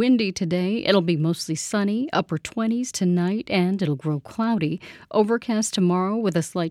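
No technical faults can be heard anywhere in the recording; the signal stays continuous and stable throughout.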